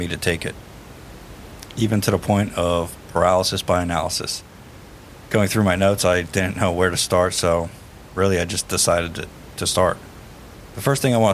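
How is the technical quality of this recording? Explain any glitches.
No technical faults are audible.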